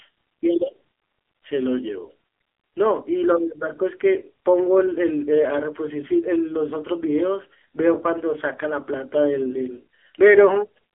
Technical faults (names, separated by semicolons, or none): AMR narrowband mobile codec